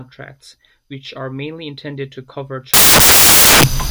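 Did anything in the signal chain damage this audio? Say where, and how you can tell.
Yes. The damage happens at sample-format conversion. From 2.74 s, just after "mainly intended to cover", to the end of the clip, the samples are built from the wrong bytes: the reader is misaligned or has the byte order swapped. Each sample's fast-changing low bits end up as its most significant part, so the speech turns abruptly into loud, harsh broadband noise.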